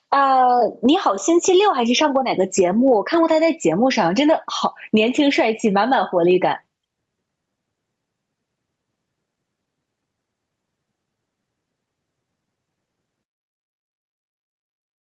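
Gain pumping runs throughout the clip: the gain ducks by roughly 15 dB under each loud syllable, squashing the speech. The likely cause is input gain set far too high, with a fast limiter clamping every peak. The top end stops near 8 kHz, as the call path's bandwidth sets it.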